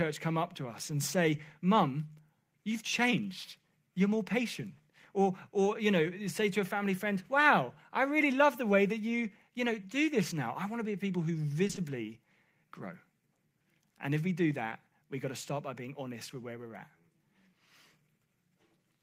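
Speech, with short concealed packet loss between 11.67 and 11.79 s. Three back-to-back 20 ms gaps, starting at 11.67, 11.71 and 11.75 s, were filled by the receiver extending the preceding sound, which gives a brief smear. On a spectrogram, the harmonics or noise run unnaturally steady there.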